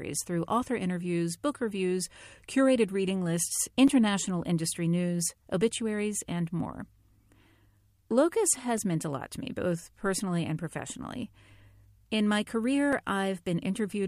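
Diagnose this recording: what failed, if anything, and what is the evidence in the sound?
Three blocks of digital silence, and the driver or buffer stage is the likely culprit. There's a tick at 3.88 s, right after "reviews curated reading lists", running about 5.8 ms, then quick ticks at 8.78 s (1.5 ms, just before "meant a lot to") and 12.93 s (2.9 ms). Each cuts out hard and back with no fade. The lengths point to 64-, 128- and 256-sample blocks, which fits output buffers not getting filled in time.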